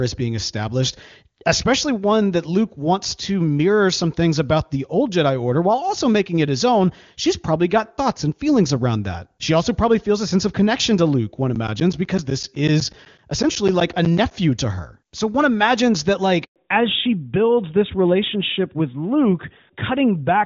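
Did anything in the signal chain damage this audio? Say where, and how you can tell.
Yes. At the driver or buffer stage, something repeatedly stalled the audio path. From 11.55 to 14.31 s, just before "to her", roughly twenty short holes of about 10 ms each are filled with silence. They are spaced 0.125 s apart and heard as steady ticks. This is periodic USB or driver dropouts.

On the network side, the call underwent a handover. Right after "one imagines that", the sound dies away at 16.44 s and stays silent for 120 ms until 16.56 s. That is a handover gap: no frames arrived while the link switched.

After the handover, from 16.56 s to the end, the codec fell back to narrowband. Before it, the HD Voice wideband codec carries clear, wideband speech. From that point nothing survives above 4 kHz, so the voice turns duller and rougher. This fits a drop from AMR-WB at about 23.85 kbit/s to AMR-NB at 12.2 kbit/s.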